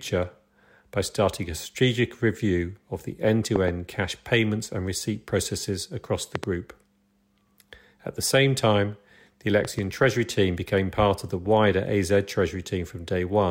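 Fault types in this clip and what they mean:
loud pop: A sudden voltage step or spike, likely from a disturbed connector, a switch or a static discharge, is added to the signal, and the circuitry after it turns that into a short, sharp transient. Here it strikes three times, at 3.56 s, 6.35 s and 9.65 s. Each is a quick double pop lasting about 0.1 to 0.16 s. All three stand well above the speech, the middle one loudest, and the speech carries on underneath.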